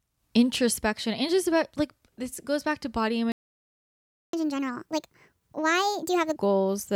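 Speech that breaks off after "goes back to body". A playback stall silences it from 3.32 to 4.33 s, about one second, likely from the player running dry. Catch-up at higher speed follows from 4.33 to 6.36 s. The backlog plays 1.5 times fast, with pitch raised by about seven semitones, then returns to normal.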